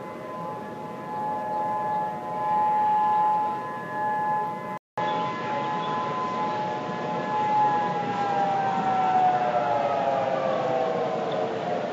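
At 4.78 s the recording most likely switched to a poorer input device, and it stays there until the end. A gap of about 200 ms marks the change. After it, nothing comes through above 7.4 kHz, so the sound turns duller and boxier, the level shifts by a few decibels, and a new background noise appears, roughly 40 dB below the signal, carrying that different device's own character through the remainder.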